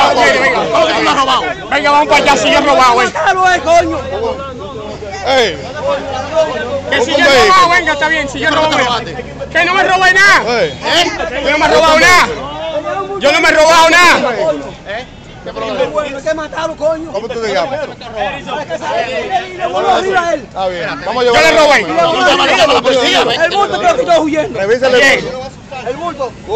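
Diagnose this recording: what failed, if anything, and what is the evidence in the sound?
Nothing in the signal chain points to a failure at any stage, from capture through to playback.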